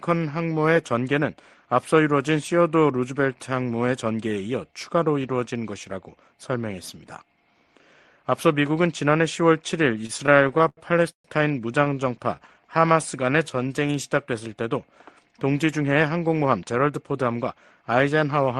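Packets arriving late repeatedly emptied the jitter buffer, causing repeated stalls (stutter) from 10.01 to 11.26 s and again from 11.84 to 12.03 s. The receiver stretched the last sound across 13 and then 4 short gaps (the longest about 133 ms), so the audio drags and catches. From 12.35 to 13.93 s a jitter buffer slow-down rebuilds the reserve by repeating pitch periods, running the audio at 87% speed and adding about 219 ms with the pitch unchanged. Later, from 15.81 to 17.67 s, a jitter buffer speed-up trims an excess of buffered audio by cutting short pieces, running at 111% and removing about a fifth of a second so the sound feels hurried. Throughout, the call codec path limits the top end to about 12 kHz, which fits Opus at around 32 kbps.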